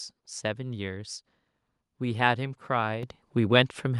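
At 3.03 s the microphone volume stepped up by about 8 dB in one jump, lifting speech and background together, unlike a speaker simply talking louder.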